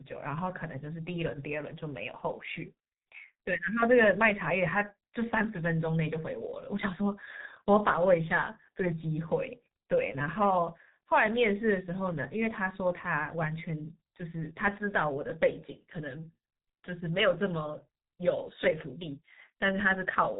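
From start to finish the speech carries heavy G.723.1 codec damage. Nothing above about 3.8 kHz survives, so sibilants and fricatives lose their edge and the whole track sounds muffled. The coarse, slowly updated voice model smears each 30 ms frame, leaving a hoarse, buzzy quality and blurred consonant onsets. The speech was coded in the codec's higher-rate mode of around 6.3 kbit/s.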